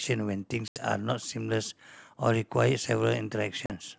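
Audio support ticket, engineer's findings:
Packet loss on an ADPCM call, G.722 wideband path at 64 kbit/s. Hard-edged silent gaps at 0.68–0.80 s (80 ms lost, about four packets) and 3.66–3.72 s (40 ms, about two packets). Speech resumes slightly distorted, because the decoder's predictor and step size have drifted from the sender's and take tens of milliseconds to re-converge. That lingering recovery, not just the hole, separates it from a plain PCM dropout.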